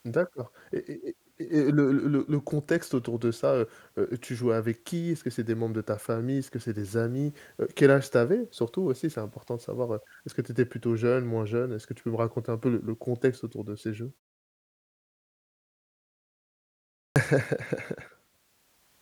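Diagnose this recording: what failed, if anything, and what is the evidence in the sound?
Clipped start after a pause, at 16.86 to 17.16 s: speech resumes abruptly out of silence with its first sounds missing, about 0.30 s swallowed after a pause of 2.75 s. The fault sits in the playback stage. The output device went to sleep during the long silence and needed that time to wake and lock again, so the opening of the next phrase was lost.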